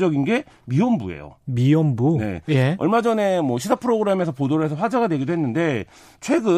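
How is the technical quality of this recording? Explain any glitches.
No technical glitches are audible.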